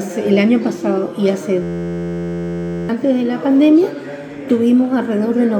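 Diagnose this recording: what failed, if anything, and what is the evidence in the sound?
The failure is at the driver or buffer stage: a system hang loop from 1.63 to 2.89 s. The sound collapses into a steady buzz at about 86 Hz as one 11.6 ms slice repeats identically, which fits a 512-sample ring buffer replayed while the host stalled. About a second and a half of audio is lost. Unlike a dropout's silence or a codec's smeared concealment, the fragment loops exactly, sample for sample.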